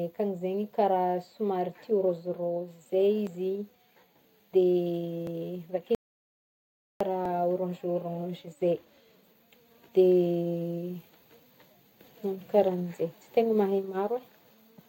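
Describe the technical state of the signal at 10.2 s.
At 10.2 s the speech signal is intact, with no audible fault at that moment.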